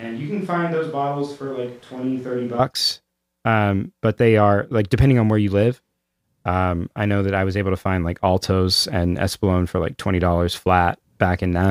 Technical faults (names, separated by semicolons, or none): switch to a distant microphone